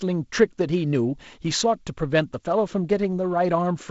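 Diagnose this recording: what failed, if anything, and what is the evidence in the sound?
Nothing failed; the wideband telephone coding behaves as expected.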